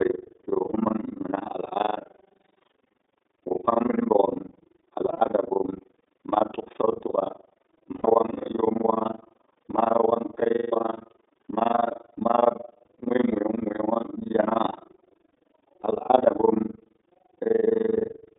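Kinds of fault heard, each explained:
iLBC codec: A narrowband VoIP codec that codes each frame's excitation on its own. Here the speech is held to a band from 250 Hz to 3.7 kHz. It sounds plainly rough and synthetic. The 20 ms framing fits its 15.2 kbps mode.
Overlap-add ripple: Frames were windowed and rejoined with an overlap that does not sum to a steady gain. The level swings by about 60 dB once per frame, at around 20 Hz. This gives a fast, rough flutter across all the speech.
Lost iLBC frames: After missing packets, the decoder repeats the last pitch cycle mixed with noise. Six gaps of 80 to 180 ms sound like held, buzzy vowels. The one near 16 s is broken into short bits. Speech comes back almost at once after each.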